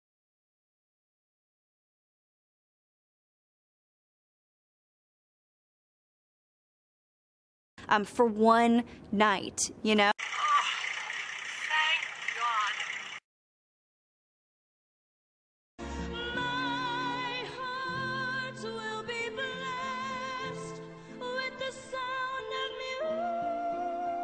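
No technical faults are audible.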